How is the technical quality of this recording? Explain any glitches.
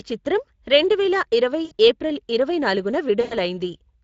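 The quality is held back by two things: codec damage running through the whole clip, and two short dropouts in the speech.

The Speex codec is audible from start to finish. This CELP speech codec rebuilds the voice from a compact model plus a coded excitation signal. At this setting, which points to a bitrate of around 20 kbps, that excitation is coarse, so the speech has a noisy, hoarse grain over it. The high end sounds more like shaped hiss than real detail.

The first dropout is VoIP packet loss concealed by the speech codec. It runs from about 1.65 to 1.72 s, right after "చిత్రం రెండువేల ఇరవై" and before "ఏప్రిల్ ఇరవై నాలుగున". Roughly 60 ms of audio went missing. The decoder filled the gap by stretching its last pitch and filter state with falling gain, so you hear a brief stretched sound that fades instead of clean speech.

The second concealed loss is longer, from about 3.21 to 3.37 s, just after "ఇరవై ఏప్రిల్ ఇరవై నాలుగున". 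About 100 ms is missing, so the extrapolated sound runs longer and decays further before real audio returns. Each decoded frame builds on the one before, so the voice stays weak and distorted for a short while after the packets come back.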